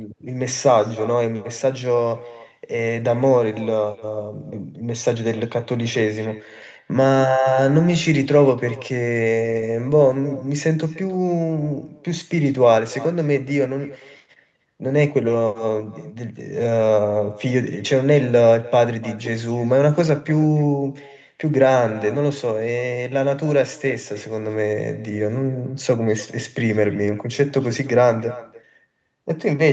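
Throughout, the speech is trailed about a third of a second later by a faint, thin copy, about 19 dB down: echo with no canceller, the far-end loudspeaker feeding back unremoved.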